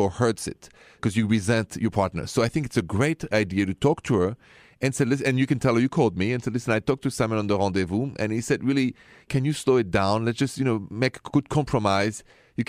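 No technical faults can be heard anywhere in this recording.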